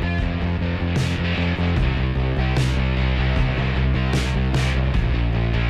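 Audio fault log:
Nothing stood out on listening.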